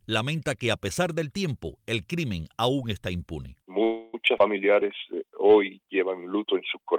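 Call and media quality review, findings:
Call audio freeze, 3.83–4.15 s: packets likely stalled in transit, draining the jitter buffer. The receiver extends the last sound as a fading buzz or hiss for about 300 ms, then resumes where it stopped. Nothing lost, but playout delay grows by roughly 0.3 s.

Skip ahead, 4.38–4.40 s: a stretch of audio dropped, in transit or by the jitter buffer on overflow, while later packets are already waiting. Around 70 ms of audio is gone, and the two sides of the jump are butted together with only a tiny join.

Jitter buffer slow-down, 4.73–5.52 s: buffer running low or target delay just raised, so the receiver repeats single pitch periods and slivers of pauses to rebuild its reserve. This adds 75 ms, so playback runs at 92% speed with unchanged pitch and stretched sounds.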